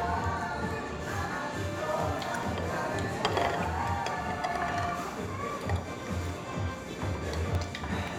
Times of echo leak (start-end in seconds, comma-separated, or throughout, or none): none